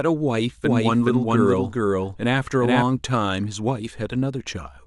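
From 0.64 to 2.82 s, a slower second capture path likely adds a doubled audio track: an equally loud, dry copy trailing roughly 0.4 s behind, cutting in and out abruptly.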